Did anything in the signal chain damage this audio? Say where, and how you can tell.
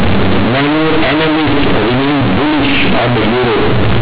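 Yes: sample-format conversion. Companded audio read as linear: mu-law bytes played as 8-bit samples buzz loudly throughout, pauses included, unlike clipping, which spares quiet parts.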